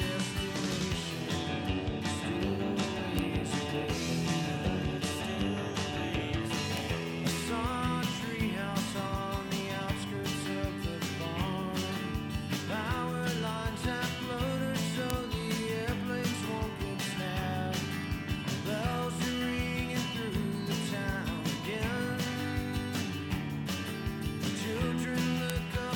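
Five bit error spikes fall at 3.19, 6.77, 15.10, 18.04 and 25.50 s: single flipped bits that throw one or two samples off and straight back, at about -10 dBFS (the 6.77 s tick about -16, the 18.04 s tick about -34). Each is a bare broadband tick, with no gap or thump as with dropouts.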